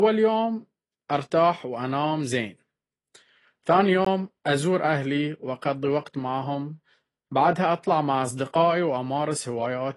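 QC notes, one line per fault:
Throughout: AAC compression, plainly audible, with nothing above 11.5 kHz and a dull, smeared, warbly texture, likely from an AAC-LC encode whose damage fits about 32 kbps.
4.05 s: block of digital silence, a 17 ms hole where the signal drops straight to silence and back without any fade.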